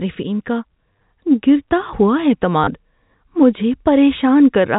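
Packet loss with last packet repeated appears from 0.93 to 1.03 s, just before "گرتا ہوا", where about 50 ms drops out in short runs, consistent with 10 ms packets, and again at 2.64 to 2.67 s, after "گرتا ہوا". Replayed chunks stutter robotically. A spectrogram shows repeated vertical slices, and the waveform shows copied blocks with discontinuities, all within the G.711 telephone band below 4 kHz.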